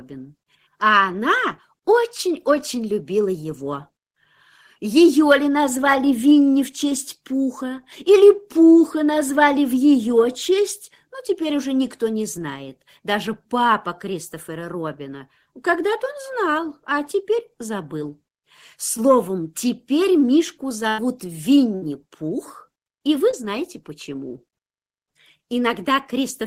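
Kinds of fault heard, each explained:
short concealed packet loss: gaps of only 10 and 20 ms at 18.97 s and 23.31 s, filled from the preceding sound, leaving just a brief smear or wobble.
burst of packet loss: about 90 and 70 ms lost at 20.89 s and 21.75 s; longer than concealment can hide, so the sound is held, fades, then skips ahead.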